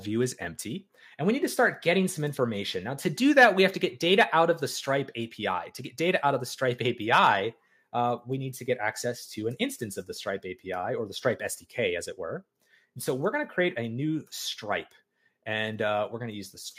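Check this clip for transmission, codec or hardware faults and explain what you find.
No transmission, codec or hardware faults turned up.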